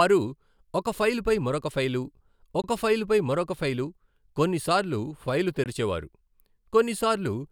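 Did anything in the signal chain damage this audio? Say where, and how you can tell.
Yes, there is a gap between chunks in the storage or playback stage. The speech drops to 20 ms of silence at 2.62–2.64 s and again at 5.64–5.66 s, 3.02 s apart. This points to audio handled in 3-second chunks, with each chunk starting late or padded at the join. Nothing is missing, but the flow is broken. On a spectrogram each hole is a narrow, full-band blank column with sharp edges. The waveform cuts abruptly to silence and resumes just as abruptly.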